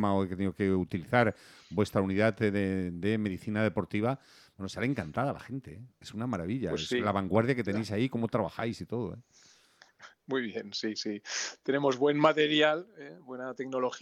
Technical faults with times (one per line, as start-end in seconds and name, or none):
none